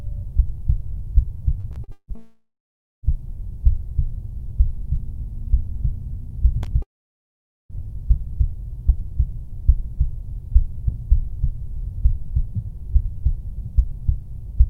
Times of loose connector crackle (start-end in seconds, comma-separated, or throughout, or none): 6.62-6.67